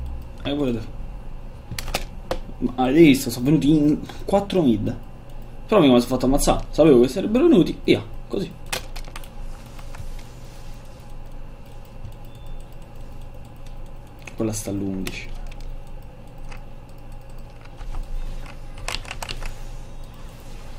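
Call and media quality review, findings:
No audible faults found across the recording; no defects to log against any component.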